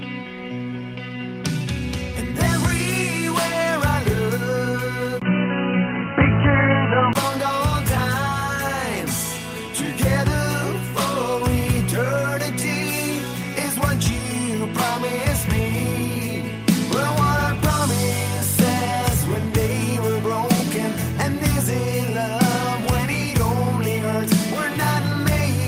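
At 5.20 s a 20 ms gap opens, and until 7.15 s the sound turns boxy, with nothing above 3 kHz, a level shift of about 5 dB and faint new noise, likely from an input switched to a poorer device. A spectrogram shows a flat ceiling, and the waveform steps.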